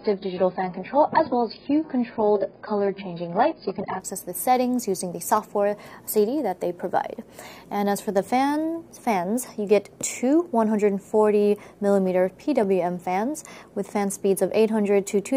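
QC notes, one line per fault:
0.0–4.0 s: adaptive stream starting at a low bitrate. Nothing above 5.1 kHz, with stronger codec artefacts, pointing to a low opening version near 12 kbit/s. At 4.0 s quality improves suddenly without a gap, fitting a step up to roughly 96 kbit/s.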